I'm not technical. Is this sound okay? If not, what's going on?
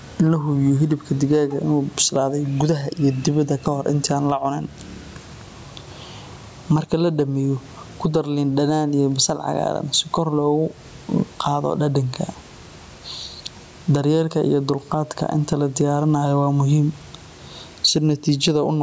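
No. Gain pumping runs throughout: the level seesaws by a large amount whenever speech gets loud. The likely cause is microphone gain set far too high, with a fast limiter clamping down on every loud moment.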